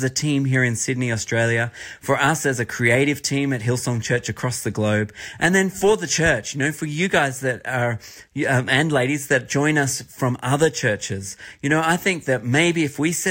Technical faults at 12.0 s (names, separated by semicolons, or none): none